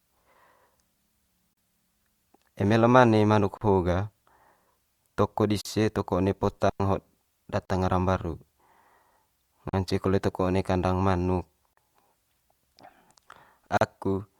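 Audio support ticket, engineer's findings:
Speech stream, 40 ms silent holes with smeared edges at 1.53, 3.57, 5.61 (just before "toko one"), 7.65, 9.69 (just before "kole toko"), 11.73 (right after "kandang manuk") and 13.77 s, every 2.0 s. Speech resumes where it stopped. Gap at a join of encoded pieces: 2 s segments encoded separately and concatenated untrimmed, so encoder start delay and last-frame padding remain.

6.69 to 6.80 s, about 104 ms clean near-silent hole, no noise burst either side, very short fade in and out. Digital wireless dropout: RF link lost too much data, receiver muted instead of passing corrupted audio.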